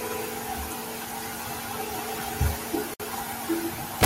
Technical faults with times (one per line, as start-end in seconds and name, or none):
2.94-3.00 gap at a join of encoded pieces
4.03-4.05 integer overflow